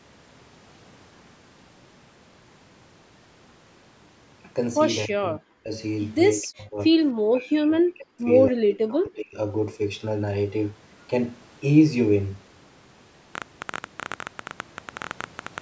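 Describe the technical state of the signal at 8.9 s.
From 8.5 to 9.37 s the speech sinks by about 35 dB, likely speech suppressed in double talk: the echo canceller ducks near-end speech during overlapping far-end talk, unlike clean packet-loss gaps.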